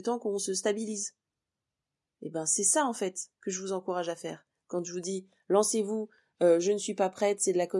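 No technical faults can be heard anywhere in the recording; the signal holds steady throughout, with nothing interrupting or disturbing it at any point.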